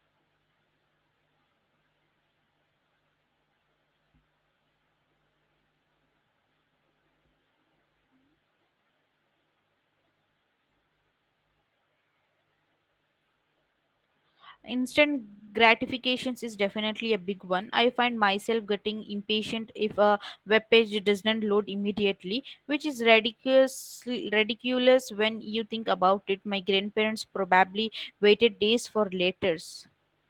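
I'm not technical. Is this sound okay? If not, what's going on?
Yes, this speech recording is technically in good shape, with nothing going wrong anywhere in it; it came through an ordinary internet call connection, which naturally trims away the highest treble above about 8 kHz.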